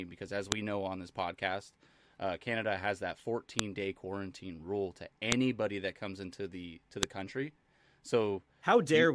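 Sharp, loud clicks at 0.52 s (between "because as" and "know on this podcast"), 3.59 s, 5.32 s (after "day quarantine rule to") and 7.03 s are a file header played as audio: joined WAV pieces kept their headers, whose bytes play back as a brief snap regardless of the speech.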